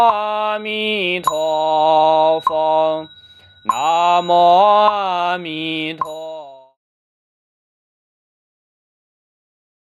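Nothing is technically wrong with this audio; the level simply fades out smoothly from about five and a half seconds to 6.78 s.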